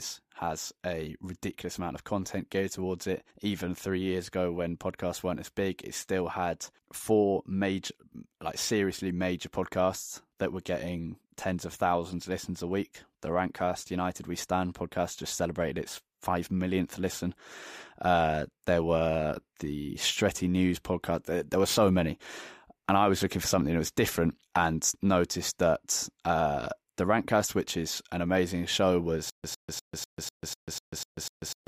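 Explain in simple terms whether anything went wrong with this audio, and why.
From 29.3 s to the end: stutter with silent gaps. A 105 ms scrap repeats nine times between 142 ms silences. The player likely stalled.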